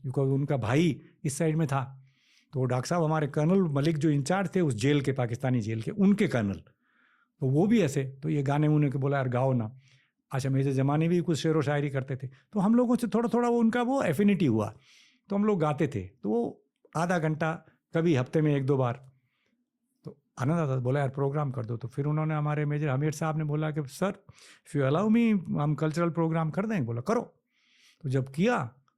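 No technical faults can be heard anywhere in the recording.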